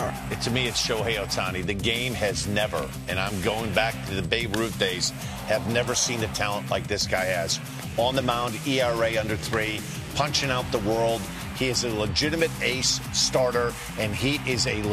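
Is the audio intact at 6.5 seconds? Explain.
Yes, at 6.5 seconds the audio is intact, with no audible fault at that moment.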